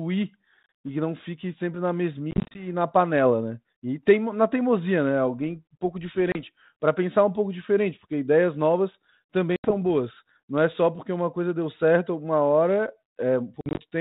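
Speech over an ADPCM telephone link, its light band-limited hiss consistent with 32 kbit/s G.726, shows packet loss on an ADPCM call at 0.63 s (before "e que não fique"), 2.31 to 2.67 s, 6.32 s, 9.56 to 9.72 s and 13.61 to 13.80 s, with 30 to 140 ms lost in each. After each hole, the decoder's predictor and step size no longer match the sender's, so sound returns slightly distorted. That mistracking is what separates it from a clean dropout.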